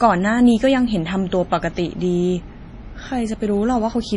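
Throughout the speech, the treble stops dead at about 10.6 kHz, and weak spectral detail flickers in and out, giving a watery, swirly texture with chirpy sibilants. That swirl sets it apart from a plain low-pass filter, and points to heavy damage from likely MP3 compression at a low bitrate around 32 kbps.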